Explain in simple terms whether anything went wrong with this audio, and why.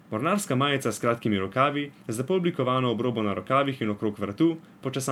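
Generation loss: the speech was likely saved as MP3 and re-saved a few times, so throughout it sounds swirly, hollow and smeared, with blurred sharp sounds.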